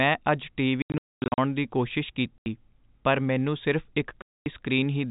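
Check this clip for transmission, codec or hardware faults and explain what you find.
The clip has packet loss filled with silence, in three places, all on the usual narrowband telephone sound of G.711 coding.

From 0.82 to 1.38 s, just before "ਦੀ ਕੋਸ਼ਿਸ਼", about 440 ms goes missing in pieces over 560 ms, with the longest hole 240 ms. Then an 80 ms gap at 2.38 to 2.46 s, between "ਦੀ ਕੋਸ਼ਿਸ਼" and "ਪਰ ਮੈਂਨੂੰ ਸਿਰਫ਼ ਇੱਕ", and a 240 ms dropout at 4.22 to 4.46 s, after "ਪਰ ਮੈਂਨੂੰ ਸਿਰਫ਼ ਇੱਕ". Lost packets were replaced by dead silence, so the speech gets chopped with abrupt, hard edges. The hole lengths fit 20 ms packets.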